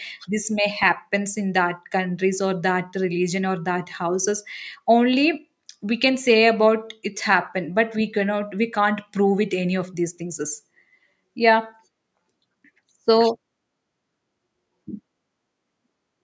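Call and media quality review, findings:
Nothing to flag on this speech clip; the call microphone processing shows up as expected, with content stopping around 8 kHz and the lowest bass trimmed, and that's just how the path is meant to behave.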